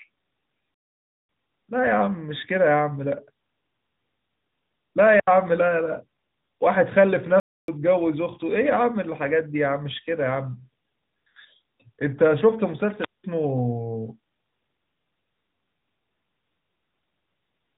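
AMR narrowband mobile codec damage runs through the whole of this speech clip: nothing above 4 kHz survives, and the voice has the plainly audible buzzy, synthetic edge of a vocal-tract model rebuilt from sparse pulses, which fits a mid-rate mode around 10.2 kbps. A playback stall cuts the sound dead from 0.74 to 1.29 s, about 0.55 s of silence, and again from 7.40 to 7.68 s, about 0.28 s, before it resumes. The abrupt stops are most likely the player running short of data or its thread being blocked. A wireless microphone squelch dropout occurs at 5.10 to 5.29 s, with a mute of about 75 ms, and at 12.99 to 13.24 s, with a mute of about 190 ms. Each time, the FM radio link fades, hiss swells, and the receiver's squelch closes before the signal recovers.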